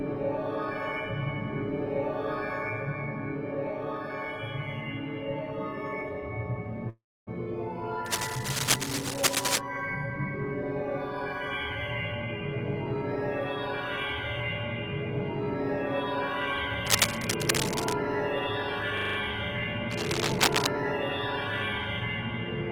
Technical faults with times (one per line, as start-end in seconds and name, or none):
6.89-7.29 call audio freeze
8.06-9.58 cable scratch noise
16.86-17.93 cable scratch noise
18.97-19.17 system hang loop
19.90-20.67 cable scratch noise